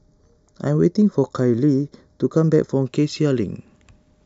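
Channel delay (comb filtering) runs from 0.0 to 2.86 s of the speech: one channel lags the other by roughly a fifth of a millisecond, and summing them to mono cancels evenly spaced frequencies from around 3 kHz upward, leaving the sound hollow and phasey.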